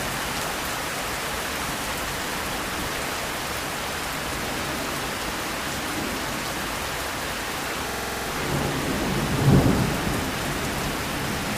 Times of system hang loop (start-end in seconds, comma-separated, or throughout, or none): 7.89-8.27